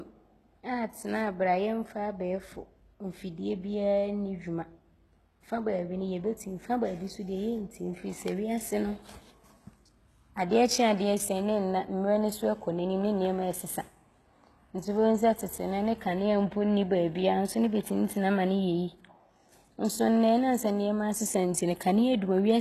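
Speech that has likely been through HE-AAC compression at a very low rate, which fits about 16 kbps. Only the lower band is truly coded and the treble is rebuilt from copied lower bands, so throughout the clip s sounds turn gritty and lispy, the damage is plainly audible, and nothing reaches above 12.3 kHz.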